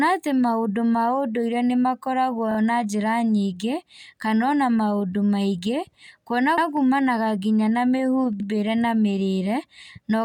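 At 2.51 s the speech stutters as a 32 ms block plays twice more, adding 64 ms. The length fits a single repeated frame. At 6.58 s and again at 8.40 s a 96 ms block plays once more, adding 96 ms each time. These are repeated frames: compressed frames were written or sent more than once, so the decoder replayed the same slice of audio and the clip grew longer by the repeated time.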